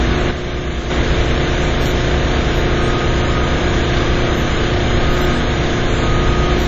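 From the first moment to the end, the audio carries heavy damage that likely comes from WMA compression at a low bitrate, consistent with about 32 kbps. The transform encoder works in long blocks, so its quantisation noise smears across tens of milliseconds around each event and weak spectral lines are thrown away. Nothing survives above 13.6 kHz, and the sounds take on a washy, ringing quality with a hiss that swells and recedes along with them.

From 0.31 to 0.90 s, one channel drops out, likely because one side of the stereo feed was lost for just over half a second. Once the two sides are summed to mono, everything shared between them falls abruptly by about 6 dB, and whatever existed only in the missing side vanishes. The sound suddenly becomes quieter, then jumps back to full level when the channel returns at 0.90 s.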